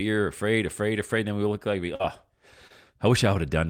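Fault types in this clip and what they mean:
Short concealed packet loss: at 1.95 to 2.02 s, right after "we look like we", and again at 2.68 to 2.72 s, stretches of about 40 ms and 20 ms of speech arrived too late to be decoded. The receiver patched each gap by extending the preceding sound, repeating its pitch where voiced or substituting shaped noise where not, then crossfaded back into the real signal, leaving a brief smeared wobble where the speech should continue.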